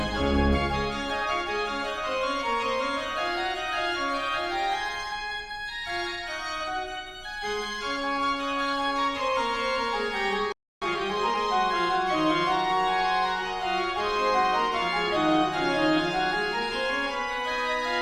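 At 10.52 s the sound cuts out mid-flow and stays silent until 10.82 s, a gap of about 0.29 s. This is a playback stall, likely the player running dry of buffered data or its output thread being held up. On a waveform it shows as a flat line; on a spectrogram, as an empty vertical band.

From 10.82 s to 11.40 s comes time-compressed catch-up: the player clears its backlog by trimming and cross-fading short slices, so the audio runs about 1.5 times fast at unchanged pitch. A spectrogram shows squeezed events with harmonics at normal heights, and the waveform shows small seams.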